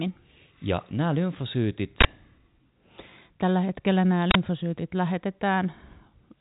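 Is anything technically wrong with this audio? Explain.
Yes. In this telephone-band speech, which carries nothing above 3.8 kHz, an uninitialised buffer fault bursts at 2.01 s and at 4.31 s, just after "hetkellä nämä". Each time, a block was played before audio was written to it, so leftover memory came out as loud digital noise lasting about 43 ms, which fits a 2048-sample block. Unlike a dropout, which goes silent, or a brief click, each burst is a short blast of noise.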